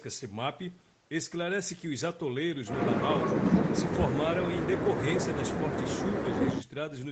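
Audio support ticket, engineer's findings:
Engineer's findings: no fault found in this speech audio; the top end stopping near 8 kHz is expected from the Opus call path, and the lowest bass trimmed by the call microphone processing is normal.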